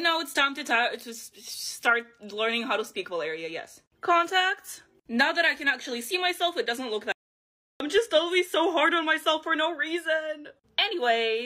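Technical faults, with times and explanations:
7.12–7.80 s: audio dropout to silence. The sound stops mid-flow for 0.68 s with no room tone left. The waveform goes flat, and the spectrogram shows an empty vertical band. The input was likely lost while recording continued writing zeros.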